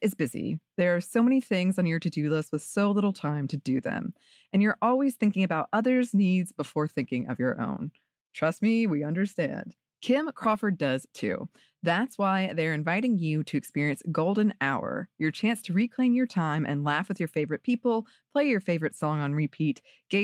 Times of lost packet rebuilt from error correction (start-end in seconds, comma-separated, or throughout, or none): 3.77-3.83, 10.49-10.55